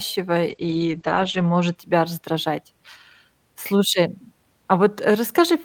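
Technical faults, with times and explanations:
0.5–1.81 s, call bitrate drop: the speech turns rough and muffled just before "тебя раздражать". The sound fits the encoder falling from about 48 to 11 kbps and coding coarsely. A spectrogram shows content above 8 kHz cut off flat for about a second before full bandwidth returns.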